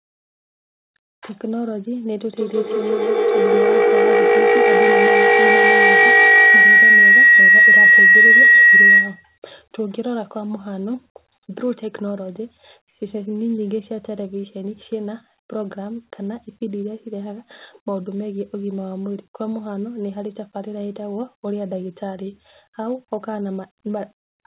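From 2.37 s to 9.44 s a shrill tone around 2 kHz swells over the speech, with the loop repeating about every 150 ms and peaking about 14 dB above it, within a band that stops at 4 kHz. This is feedback howl: two devices in one room shared the call, so loudspeaker output re-entered a microphone and grew louder on each trip round the loop, narrowing to the frequency the loop favoured until the loop was broken.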